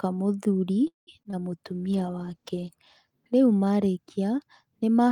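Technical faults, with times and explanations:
0.87–1.09 s, call audio freeze: the speech stalls into a fading buzz and about 0.15 s of silence, then resumes intact, likely from delayed packets draining the jitter buffer.
1.23 s and 1.31 s, short concealed packet loss: two brief smears where roughly 20 ms each went missing and the decoder extrapolated the preceding sound before blending back.
1.69–2.83 s, call bitrate drop: speech turns rough and muffled as the encoder falls from 32 to 13 kbps, coding coarsely and trimming highs for about a second.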